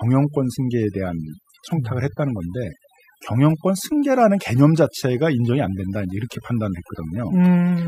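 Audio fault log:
Throughout: overdone noise removal. A noise reduction stage set too aggressively is cutting individual frequency bands down or out wherever they sit near its noise estimate, taking the quieter parts of the speech with them. This leaves near-silent gaps with twinkling specks.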